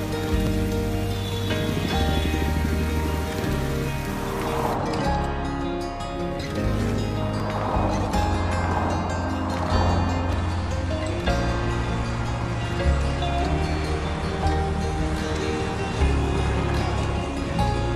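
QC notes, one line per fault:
0.47–0.51, 5.45, 6.39–6.42, 7.40, 8.35–8.38, 10.33–10.36 s: overlap between stream segments. At each, overlapping timestamps cut 16 to 40 milliseconds, so the waveform jumps, spaced to fit about one-second segments.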